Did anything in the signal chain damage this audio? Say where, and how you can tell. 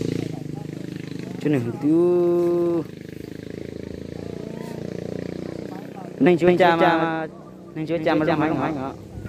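Yes. From 6.47 s to the end there's a doubled audio track: a second, full-band copy of the sound trailing about a fifth of a second behind, roughly 5 dB down, snapping in abruptly with no decay or room colour. That's likely a second, slower capture path.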